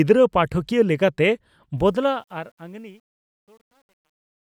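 After "ᱯᱟᱴᱷᱠᱤᱭᱟᱹ ᱞᱮᱠᱟᱛᱮ", from 1.78 s, the fade-out picks up truncation distortion: undithered steps, consistent with a 10-bit stage, turn gritty from 2.66 s onward.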